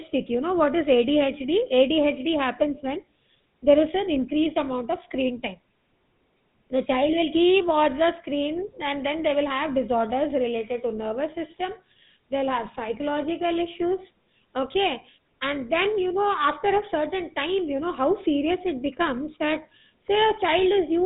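Throughout, GSM full-rate codec damage is plain: pulse-excited vocal-tract coding gives the speech a buzzy, gravelly roughness, and the spectrogram is empty above 3.8 kHz.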